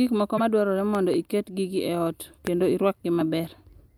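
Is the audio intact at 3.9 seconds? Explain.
Yes, the speech at 3.9 seconds is intact, with no audible fault at that moment.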